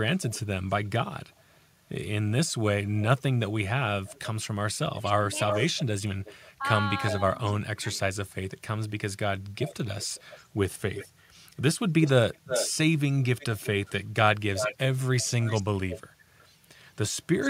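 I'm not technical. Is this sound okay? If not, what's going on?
No, there are two problems here. The first is an echo leak. From 0.16 to 8.0 s, and again from 9.6 s to the end, you hear a second copy of the speech trailing about a third of a second behind, at 360 ms and then 365 ms. It's somewhat quieter than the main speech in the first stretch and noticeably louder in the second. The likely cause is someone on speakerphone whose echo canceller let their loudspeaker's sound slip back into the call.

The second is speech suppressed in double talk. Between 5.01 and 7.88 s, the speech dips sharply in brief patches that add up to under half a second. It most likely happened because both sides were talking at once, and the echo canceller couldn't tell the real talker from the echo, so it turned everything down.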